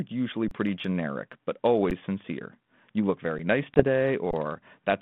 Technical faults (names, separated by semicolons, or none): underrun with held sample; packet loss on an ADPCM call